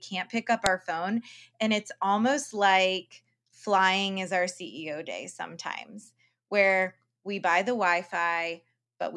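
A file header played as audio sits at 0.66 s in this speech clip, heard as a single sharp, loud click between "pick up" and "our phone". The snap arrives abruptly regardless of the speech around it, which points to two WAV pieces being joined at that spot without the second one's header being removed. Those few dozen bytes of file metadata were read as sample values, producing a brief burst of arbitrary amplitude.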